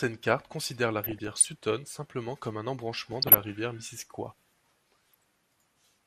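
Throughout the speech the sound is dull and plainly gurgling, with grainy distortion on the upper range, as if high bands were dropping out. That points to MP2 compression at a low rate, likely around 80 kbps, starving the upper sub-bands of bits.

From 1.04 to 1.46 s, between "cartes considèrent la" and "simplement comme un", bursts of burbling break in. It returns from 3.12 to 3.44 s, after "simplement comme un", and briefly at 5.12 to 5.23 s. This is DAB burbling: a small fraction of bit errors, under one percent, slips past error correction and makes single sub-bands jump in level.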